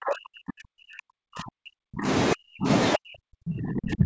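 Speech suppressed in double talk runs from 0.0 to 2.08 s, 2.33 to 2.69 s and 2.95 to 4.05 s of this speech clip, dropping the voice by roughly 40 dB, likely because the echo canceller could not separate this side's talker from the loudspeaker echo and turned both down, within an 8 kHz call band.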